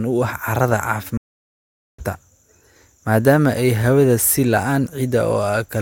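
At 1.17 s the speech drops out for about 0.81 s, a stream reconnect: the connection broke, the player went quiet, then reconnected and started a fresh decoder. When sound returns at 2.03 s it has skipped ahead roughly half a second, so a bit of speech is simply missing.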